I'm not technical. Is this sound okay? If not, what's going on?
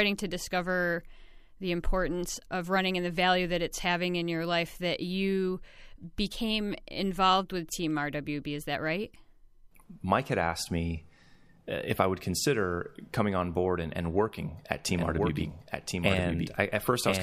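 No. A doubled audio track starts at about 14.89 s, just after "and and working at", and continues to the end. A second copy of the same speech plays about a second behind the first, a little quieter, so the talking overlaps itself like a clean, abrupt echo. It likely comes from the audio being recorded twice, once through a slower route, or from an edit that left two misaligned copies in place.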